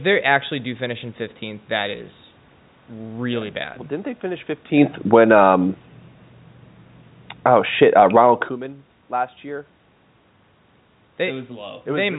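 From 4.74 s the speech and the room noise behind it sink together, drifting down by about 8 dB until 8.31 s. This is automatic gain falling: just after the talker shifts position around 4.5 s, the gain control judges the input too loud, or its background too strong for the current setting, and steadily pulls its gain back. Because the control acts on the whole signal, voice and background fall as one.

Inside that decline, from 5.3 s to 5.78 s, the level briefly swells by about 4 dB, with the background rising alongside the voice. This is automatic gain rising: over that half second the control treats the input as too quiet and lifts its gain. The overall downward trend then continues to 8.31 s, and the talker moves again around 8.5 s. Throughout, the sound stays within the telephone band, with nothing above 4 kHz.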